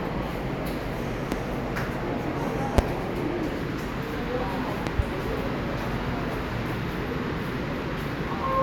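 Loud pops land at 1.32 to 1.35 s, 2.78 to 2.81 s, and a double one at 4.87 to 5.02 s, each a sharp thump roughly 20 to 25 dB above the sound, which carries on underneath. They likely come from a voltage spike such as a switch, plug or static discharge.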